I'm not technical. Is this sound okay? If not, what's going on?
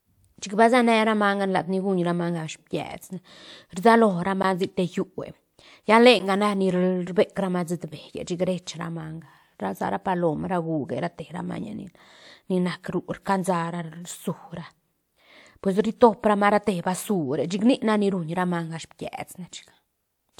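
No. There's a block of digital silence at 4.43 s and again at 6.19 s: the sound drops to nothing for a split second and snaps back, making a tiny click.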